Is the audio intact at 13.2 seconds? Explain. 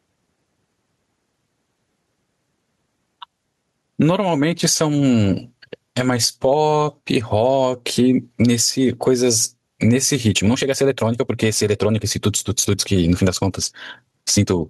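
No. At 13.2 seconds the speech sounds rushed at unchanged pitch, part of a time-stretched section from 10.27 s to the end, likely sped up 1.44 times by dropping short pieces. Gain pumping also runs throughout: the gain swings by about 15 dB under loud sounds, likely from excessive gain with fast limiting.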